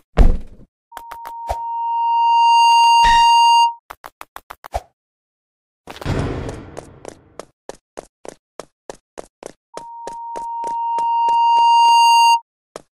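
From 0.91 to 3.80 s and again from 9.74 to 12.42 s there's loudspeaker feedback squeal: the mic is hearing its own speaker, and a 932 Hz tone runs away, swelling over a second or two to sit roughly 10 dB above the audio.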